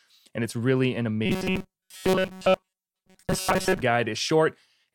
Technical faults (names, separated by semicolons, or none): robotic sound from repeated short buffers